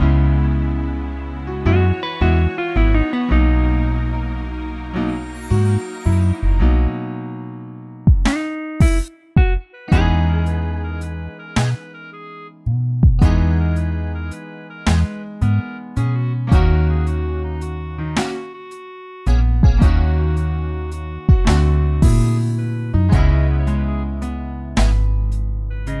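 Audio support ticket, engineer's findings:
No audible faults found on listening.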